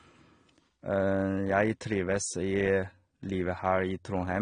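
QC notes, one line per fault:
throughout, AAC compression: speech is dull and smeared with fizzy, warbling sibilants, likely from AAC-LC at a bitrate fitting 32 kbps thinning the highs.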